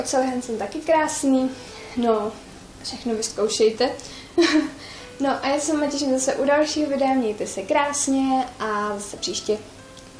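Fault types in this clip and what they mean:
Nothing stood out on listening to this clip.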